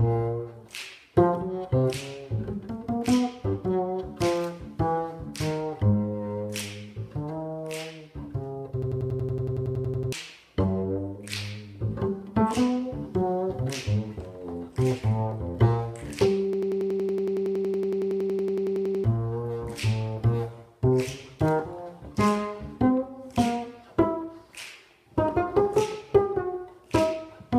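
At 8.82 s the sound locks into a system hang loop until 10.12 s. A piece about 93 ms long repeats exactly, at 10.8 times a second. That rate gives a machine-gun stutter, and it fits a 4096-sample ring buffer replayed while the system froze. About 1.5 s of audio is lost. The same fault returns from 16.53 s to 19.04 s, with the same loop length and rate. About 3 s goes missing there.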